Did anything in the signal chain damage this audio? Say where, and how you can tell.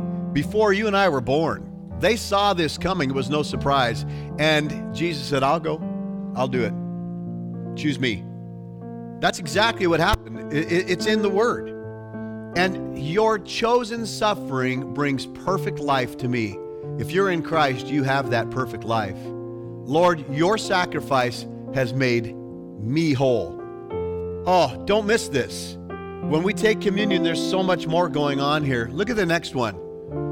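No, nothing along the chain can be heard to have damaged this audio, so there is no stage to point to.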